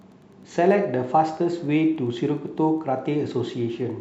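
Wi-Fi interference runs through the whole speech clip as a faint, steady ticking well below the speech, about ten ticks a second. A nearby Wi-Fi radio's beacon, repeating every 102.4 ms, is being picked up and rectified by the audio circuit.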